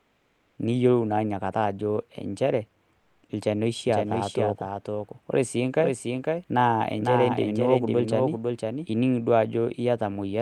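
Speech carried over a call path whose codec band tops out around 12 kHz. The sender's voice detector likely stopped transmission during pauses, so the receiver filled 0.00–0.55 s and 2.99–3.23 s with comfort noise in place of the background: a steady, featureless hiss, about 2 dB quieter in the first gap and level in the second. From 3.88 s to 8.86 s, a second capture path or edit likely mixed in a doubled audio track. A full-band copy sits about half a second behind, a few decibels quieter and dry, and it starts and stops abruptly.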